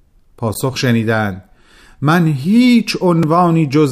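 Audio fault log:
0.54 s: block of digital silence, about 11.6 ms of zeros cut in without fades, which fits a missed 512-sample buffer, so it sounds like a short clicked dropout.
3.23 s: block of digital silence, a 2.9 ms gap fitting a 128-sample buffer, so brief that its hard edges merge into a single tick.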